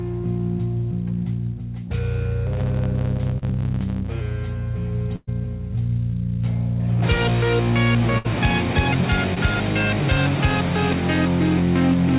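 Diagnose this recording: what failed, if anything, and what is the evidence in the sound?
Buffer stage: a block size mismatch (truncated) from 2.46 to 4.21 s gives a steady 109 Hz buzz, with the audio running 1.09 times fast. The ends of the blocks are discarded, so nothing stops, unlike a dropout.

Network: short concealed packet loss at 3.38–3.44 s and 9.34–9.38 s. The receiver briefly continued the preceding sound over about 40 ms and 20 ms of lost audio. Each is a quick smear.

Network: a burst of packet loss at 5.16–5.29 s and 8.18–8.26 s. A held sound decays over 114 ms and 64 ms, with 10 ms of silence in the first. The audio then jumps ahead, skipping 120 ms and 60 ms.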